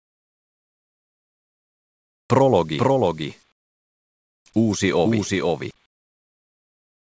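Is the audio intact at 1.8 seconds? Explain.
No. At 1.8 s the clip is inside a stretch of comfort noise in place of the background that runs from 0.00 to 2.30 s. The real background, about 47 dB below the loud parts, is replaced by a steady, featureless hiss about 14 dB quieter, band-limited to 8 kHz by the G.722 call path. The likely cause is discontinuous transmission: the sender paused sending during silence, and the receiver filled the gap with synthesized noise until sound resumed.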